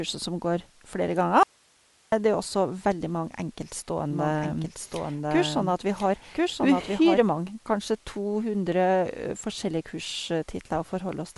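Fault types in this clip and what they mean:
Bluetooth LC3 compression: The speech has a breathy, grainy edge, with plainly audible codec damage and nothing above 11.5 kHz. This is likely LC3 coding in 10 ms frames, at a rate that fits about 48 kbps, zeroing the upper spectrum and filling it with noise.
audio dropout to a faint residue: After "som går flere" at 1.43 s, the speech cuts out abruptly and only hiss remains, about 35 dB below the speech, until it snaps back at 2.12 s with "det er også veldig". The wanted signal was likely lost while the path after the break stayed live.
doubled audio track: From 4.11 s to 7.21 s, just before "mange kanskje to", a second full-band copy of the speech plays at the same level, roughly a second behind, with no room colour and an abrupt start and stop. The likely cause is the same audio captured again through a slower path.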